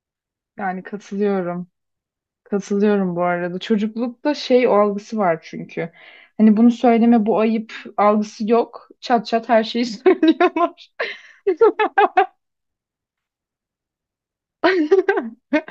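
No audible technical faults here.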